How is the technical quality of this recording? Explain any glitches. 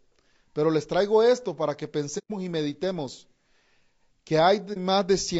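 The speech throughout has plainly audible coding damage, and there are two short dropouts.

Low-delay AAC compression runs throughout. The speech sounds rough and grainy, with noise between harmonics, likely from AAC-ELD's short frames at roughly 32 kbps.

AAC frame loss with muting occurs from 2.18 to 2.31 s, between "traigo esto para que" and "y meditemos", and again from 4.73 to 4.78 s. The decoder zeroed the missing frames' spectrum, and overlapping windows fade the sound out and back in. The result is a soft-edged hole of 120 ms, then a brief 30 ms dip, which fits four lost frames and then one.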